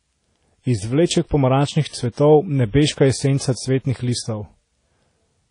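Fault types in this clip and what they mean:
WMA compression: throughout the speech, a plainly audible washy, ringing smear and hiss that breathes with the signal, with nothing above 10.1 kHz. This is likely a WMA 1 encode at a low bitrate near 32 kbps, its long transform blocks spreading quantisation noise and zeroing weak components.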